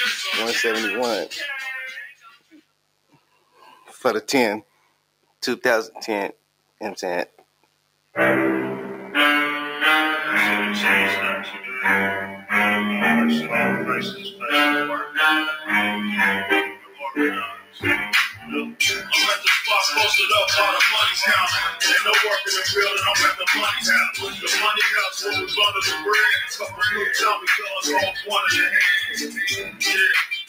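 Sharp switching spikes from the 50 Hz mains supply, entering through a dimmer, a rectifier or a missing shield, leak into the signal path for the whole clip. They produce a mains buzz, a steady raspy tone of harmonics reaching into the kilohertz range, sitting around 30 dB below the signal.

A noise suppressor built for speech stays active across the whole clip and treats steady tones, ambience and decays as noise to be removed. Its gain keeps moving, so the level of the sound swings by around 10 dB as attacks get through and sustained parts are pulled down.

That suppressor turns the sound down further in five stretches: 2.05 to 5.42 s, 6.33 to 8.15 s, 14.15 to 15.7 s, 16.67 to 19.11 s, and 23.39 s to the end. Drops reach about 17 dB in the first, second and fourth, about 9 dB in the third and about 14 dB in the last. Sustained and fading sounds sink or have their tails cut short, while sudden onsets mostly survive.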